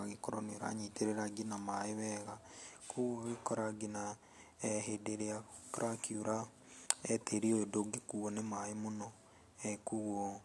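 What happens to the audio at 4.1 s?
Nothing goes wrong at 4.1 s; the speech there plays through intact, with no dropout, click, distortion or other fault at that moment.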